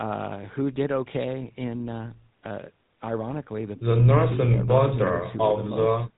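From start to finish the speech has passed through the GSM full-rate codec. Its bitrate points to about 13 kbps. The codec rebuilds the voice from a vocal-tract model driven by sparse, regularly spaced pulses, so the voice comes out buzzy and gravelly. Nothing survives above 3.8 kHz, which leaves it plainly dull and narrow.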